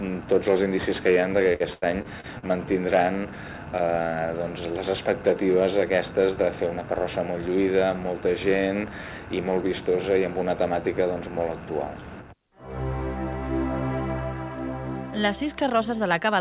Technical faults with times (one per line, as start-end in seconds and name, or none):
1.52-2.44 repeated packet loss (robotic sound)